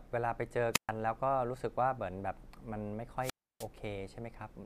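At 0.73 to 0.90 s and again at 3.20 to 3.67 s the speech suffers a wireless microphone squelch dropout. The radio signal fades, hiss swells, then the receiver mutes for about 129 ms and 308 ms: broadband noise, then flat near-silent waveform gaps.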